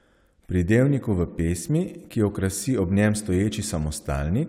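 No technical faults turn up anywhere in the recording, so there is nothing to set out in time order.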